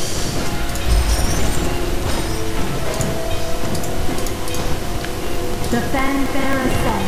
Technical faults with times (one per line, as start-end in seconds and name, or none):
4.18-6.98 periodic USB or driver dropouts